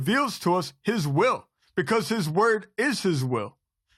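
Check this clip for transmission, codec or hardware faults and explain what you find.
There is one fault. From 1.49 s to the end, the adaptive stream drops to a lower bitrate because the connection slowed. The switch is sudden, with no gap. Nothing remains above 13.6 kHz, so the treble goes dull. This fits AAC falling from 96 to 48 kbit/s.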